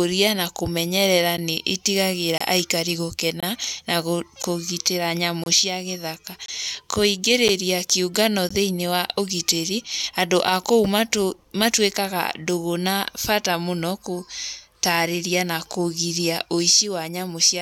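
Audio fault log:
1.37, 2.38, 3.40, 4.42, 5.44, 6.46, 7.48 and 8.49 s: gap between stream segments. The speech drops into brief hard-edged silences, about 9 to 26 ms each, recurring once per second, the first just after "na kũmenyerera" and before "nĩ itigagĩra aikari". The steady 1.0 s spacing points to segment boundaries whose timestamps leave a small gap. The player fills each gap with silence, so nothing is lost, but each join sounds as a hole.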